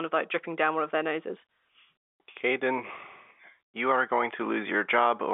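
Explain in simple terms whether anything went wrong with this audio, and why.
Nothing went wrong: the speech carries the narrow, slightly boxy sound of an ordinary landline call, because G.711 telephone coding keeps only the middle range of frequencies, and that is simply how phone audio is meant to sound.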